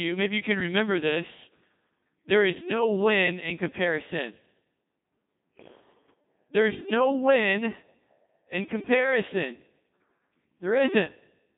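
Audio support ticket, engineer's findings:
Codec 2 vocoder, whole clip. Robotic, buzzy speech resynthesised from sine waves; band roughly 150 Hz to 3.7 kHz, nothing above 3.8 kHz. Consistent with about 2.4 kbit/s. Unlike plain telephone band-limiting, natural waveform and timbre are gone, not just narrowed.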